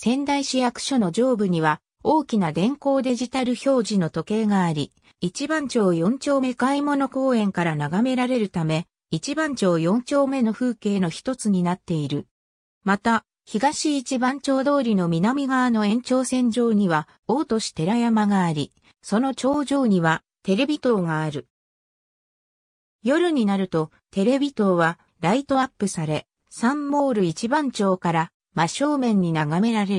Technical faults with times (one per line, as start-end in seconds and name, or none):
none